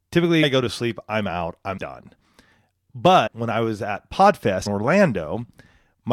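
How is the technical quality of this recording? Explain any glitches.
The recording is marred by four compressed frames skipped events in this speech. At 0.42 s, just before "go to sleep I'm", roughly 300 ms goes missing. At 1.77 s, after "to sleep I'm out", a shorter gap of well under 100 ms drops out. Around 3.26–3.28 s, before "when I was at", and again at 4.65 s, about 100 ms is lost each time. Whole compressed frames were lost or rejected by the decoder, so playback jumps forward by the length of the missing frames.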